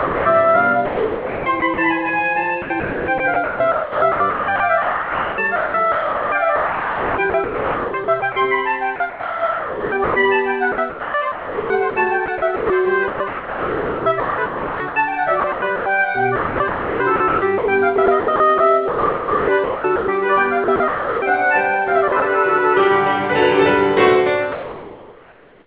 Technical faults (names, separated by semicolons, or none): sound dropped by the voice detector; sound chopped by the voice detector; comfort noise in place of the background